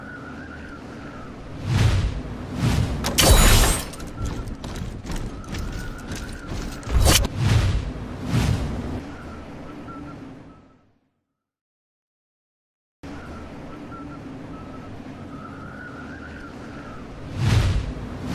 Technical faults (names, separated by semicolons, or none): none